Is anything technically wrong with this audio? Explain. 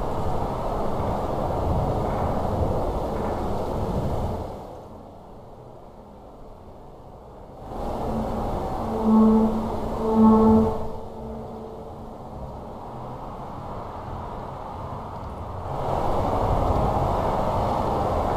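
Yes. From 7.52 to 7.85 s there is zipper noise. The level shifts by roughly 15 dB in unsmoothed 2 dB steps, about twenty a second, and each step clicks. That is heard as a zipping tick that rides on the sound while the level moves.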